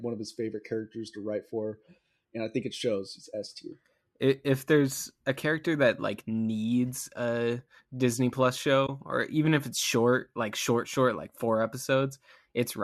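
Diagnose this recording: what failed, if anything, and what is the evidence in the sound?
AAC frame loss with muting in the network-to-decoder path: between 8.87 and 8.89 s the speech briefly drops to silence, with about 20 ms missing, which fits two short low-delay frames. The decoder zeroed the lost frames' spectrum, and the overlapping windows faded the sound out and back in, so the hole has soft edges. A buffer underrun or sample drop would instead cut abruptly with a click. The light roughness elsewhere is likely AAC-ELD coding at 64 kbps.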